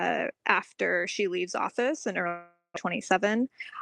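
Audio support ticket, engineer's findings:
Long network dropout, 2.27 to 2.78 s. Last sound stretched into a fading buzz for about half a second, ending in roughly 140 ms of silence. About 400 ms of audio lost outright. Likely cause: packet loss on the network path.

Jitter buffer speed-up, 3.00 to 3.81 s. Playback about 4% fast at unchanged pitch. Receiver trimmed repeated pitch-period slices, a few tens of ms in total, to drain backlog after the outage. Opus path, content ends near 12 kHz.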